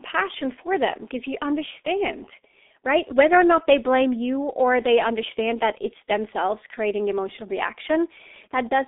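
G.723.1 codec damage runs through the whole clip: the speech passes through a low-rate telephony coder, consistent with its 6.3 kbit/s mode, working in 30 ms frames. Nothing survives above 3.8 kHz, leaving a muffled, hoarse voice with smeared, indistinct consonants.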